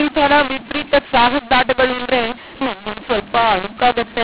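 Throughout, the speech is harsh and gritty, with hiss in the pauses. This is a mu-law and A-law mix-up: mu-law telephone samples decoded as A-law, scrambling every level.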